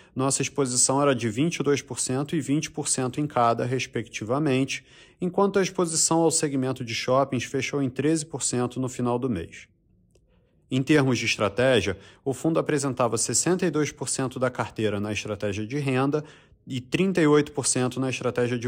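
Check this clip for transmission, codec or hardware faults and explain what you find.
One fault turns up, near the end of the speech. From 17.34 to 17.70 s, just after "estratégia de renda e", there is hard clipping. The signal pushes only about 1 dB past what a stage in the chain can pass, so the highest peaks are sliced flat. Those flat tops throw off harmonics high in the spectrum, heard here as a brief crackle on the loudest moments. A limiter or soft clipper would round peaks off more quietly, without that edgy grit.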